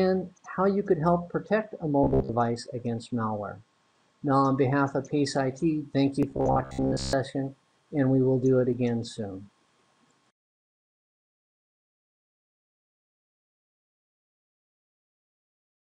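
Robotic sound from repeated short buffers appears from 2.04 to 2.34 s and again from 6.31 to 7.13 s: a rigid, metallic buzz pitched at 66.7 Hz, which fits a 15 ms segment looping. The likely cause is audio arriving too seldom, so playback repeats that fragment for most of each stretch and skips the real sound in between.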